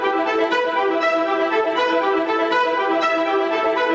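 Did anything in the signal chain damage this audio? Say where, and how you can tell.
Yes. Gain pumping runs throughout: the gain swings by roughly 10 dB as it is pulled down on loud sounds, flattening dynamics. The likely cause is excessive microphone gain driving a fast limiter or compressor. Unlike a noise gate, pumping raises the gain in the gaps rather than cutting them to silence.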